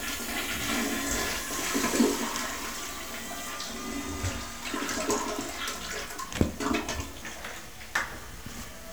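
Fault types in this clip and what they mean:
Low bit depth without dither: likely 7-bit truncation with no dither, so rounding error tracks the sound, making it grainy throughout, with noise about 20 dB below signal.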